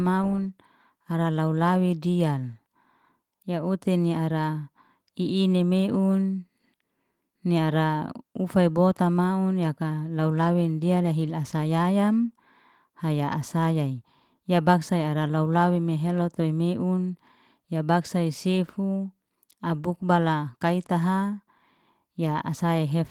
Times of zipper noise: none

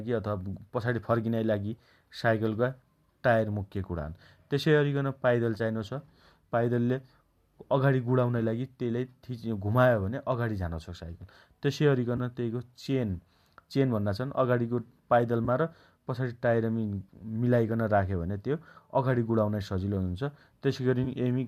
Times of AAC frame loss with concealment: 0.54, 5.58-5.61, 12.16-12.20, 15.45-15.48, 17.68, 21.04-21.07

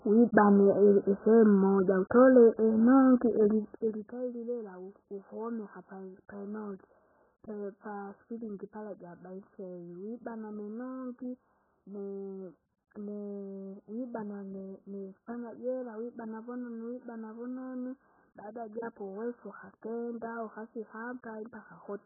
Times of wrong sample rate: none

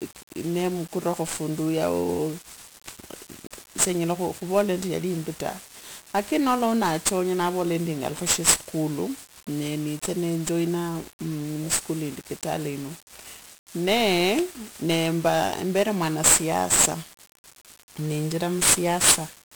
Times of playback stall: none

